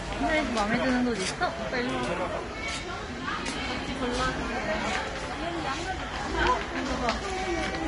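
Throughout the recording the audio sounds hissy and grainy, with roughened tones, blurred attacks, and nothing above about 10.6 kHz. This is likely Vorbis compression at a low bitrate, around 33 kbps by ear, which quantises the treble so coarsely that its fine detail turns to noise.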